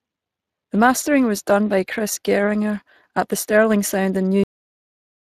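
A speech recording with two faults. Throughout, the Speex codec leaves plainly audible damage: the voice has the grainy, hoarse texture of CELP coding, where the excitation is only approximated. The sound points to around 22 kbps. On a spectrogram the harmonics look smeared and speckled rather than cleanly striated, and nothing appears above about 15.4 kHz. At 4.44 s a cut-off end stops the audio in the middle of a sound: the final buffers were never written, so the signal drops straight to digital silence with no decay and stays there to the end. The waveform shows a sharp vertical edge at that point followed by a dead-flat line, and the spectrogram shows the sound ending abruptly, with a blank region after it.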